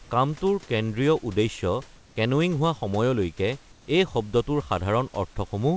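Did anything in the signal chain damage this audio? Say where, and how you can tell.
Yes, in call processing. From 1.96 to 2.16 s and 3.72 to 3.88 s, the pause background turns into steady, featureless hiss at nearly unchanged level. This is comfort noise in place of the background, likely from discontinuous transmission, with the receiver synthesising shaped noise.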